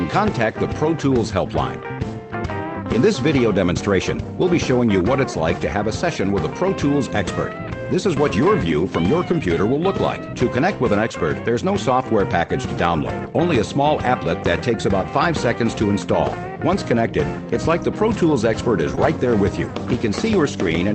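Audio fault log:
8.27 to 9.75 s, lost packet rebuilt from error correction: six separate 20 ms frames, at 8.27, 8.31, 8.69, 9.31, 9.57 and 9.75 s, were played from the low-bitrate copy carried in the following packet, so there is no gap. Each one is rougher and noisier. On a spectrogram each shows as a thin vertical strip of grainier texture, with the waveform unbroken.
18.13 to 20.07 s, lost packet rebuilt from error correction: six more 20 ms frames were restored from the redundant copy, at 18.13, 18.97, 19.03, 19.25, 19.93 and 20.07 s. They sound like the earlier ones: brief rough, noisy grain with no dropout. In the waveform there is no break, only a 20 ms patch of coarser detail. In the spectrum, each patch sits inside a band that ends around 8 kHz.
18.95 to 18.99 s, short concealed packet loss: about 20 ms of audio arrived too late. The receiver filled 16 ms of it by extending the preceding sound, then blended back into the real signal, which gives a short smear or wobble. 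The waveform shows a stretch of repeated or noise-like cycles before the cross-fade. The spectrogram shows a smeared column where fine detail is lost.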